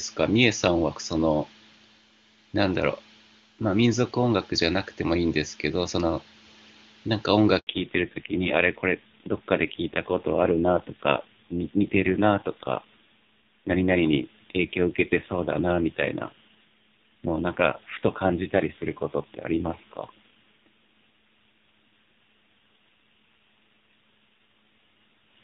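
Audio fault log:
7.59–7.67 s, handover gap: the speech cuts to silence for 80 ms as the call switches networks and no speech frames arrive during the transfer. The audio fades within tens of milliseconds, and whatever was spoken in that window is lost.
7.67 s to end, fallback to narrowband: after the gap, nothing above 4 kHz remains, so the speech sounds duller and rougher than the clear wideband audio before 7.59 s. The added rasp points to a low-rate narrowband codec such as AMR-NB at around 5.9 kbit/s.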